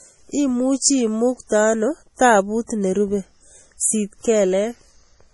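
From start to finish the speech sounds watery and swirly, with a metallic, chirping edge on s sounds and consonant attacks that smear rather than snap. Nothing is heard above 11.5 kHz, so the top end is dull. The damage is heavy, and the likely cause is MP3 compression at a low bitrate, consistent with around 32 kbps. Short of bits, the encoder cut the treble at a fixed point and dropped weak frequency lines, which flicker on and off between frames.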